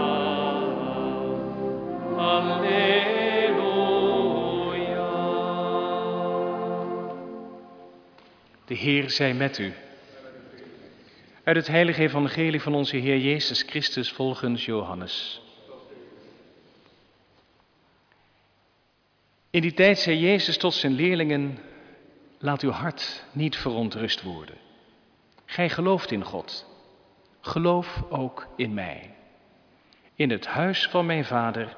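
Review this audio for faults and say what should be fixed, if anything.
Nothing needs fixing; no faults were found.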